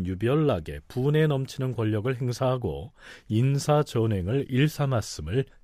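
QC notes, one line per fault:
No faults found in this speech clip; nothing to flag.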